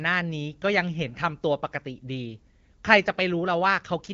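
No technical faults occur in this speech, which is carried through an AMR wideband (HD Voice) codec path at 12.65 kbit/s.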